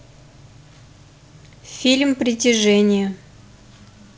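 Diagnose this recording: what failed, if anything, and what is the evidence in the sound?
Nothing failed; no faults heard.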